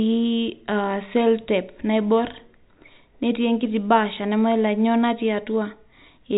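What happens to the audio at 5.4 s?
Nothing goes wrong at 5.4 s: the speech continues intact there, carrying only the narrow, telephone-band sound of its G.711 coding.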